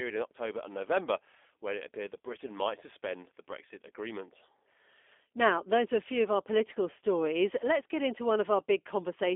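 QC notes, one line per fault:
throughout G.729 codec: plainly rough, synthetic speech with nothing above 3.5 kHz, rebuilt from a vocal tract filter and sparse pulses, which fits 8 kbit/s.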